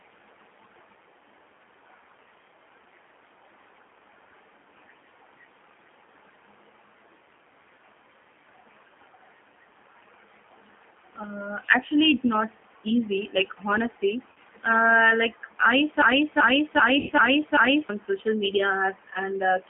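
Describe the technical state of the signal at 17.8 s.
At 17.8 s you're near the end of a broken-record loop that runs from about 16.02 to 17.89 s. A fragment of roughly 0.39 s plays back to back five times, identically each pass, so the sound just stutters in place and whatever should have come through in those couple of seconds is gone. The likely cause is a stalled player, encoder or stream that kept resending the last chunk in its buffer.

Under that, the whole clip carries G.729 codec damage, and it's plainly audible here too. The speech has been rebuilt from a vocal tract filter, a pitch predictor and a few pulses per frame, which gives it that rough, slightly synthetic texture. The band is squeezed to about 200 Hz to 3.5 kHz, so it sounds thin and telephone-like, consistent with the 8 kbit/s G.729A variant.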